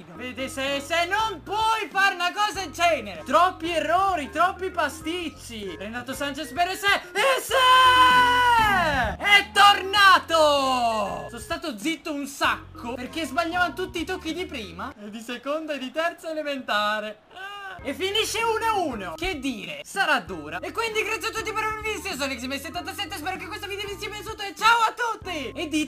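Between 13.13 and 16.08 s the sound picks up a rough, metallic edge, and that's periodic clock jitter. Interference is wobbling the converter clock at around 2 kHz, so every component grows sidebands spaced that far either side, strongest on the brightest parts.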